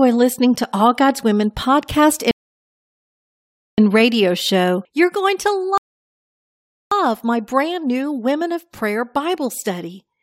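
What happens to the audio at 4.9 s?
Nothing goes wrong at 4.9 s; the speech runs through that moment intact, with no dropout, click or distortion.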